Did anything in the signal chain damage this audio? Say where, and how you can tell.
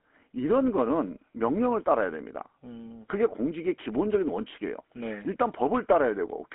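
Yes, at the codec stage: the whole clip carries GSM full-rate codec damage. The band sits roughly between 250 Hz and 3.4 kHz, with nothing at all above 3.7 kHz, and the speech has a plainly audible buzzy, gravelly texture from start to finish. That roughness comes from the vocal-tract model being driven by a sparse, regularly spaced pulse excitation instead of the real waveform, which fits GSM full rate at 13 kbps.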